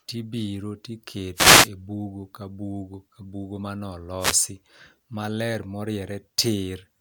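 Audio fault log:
1.34–1.70 s and 4.19–4.40 s, wireless microphone noise hit: brief bursts of static swish over the speech as the FM radio link fades and receiver noise rises through the signal.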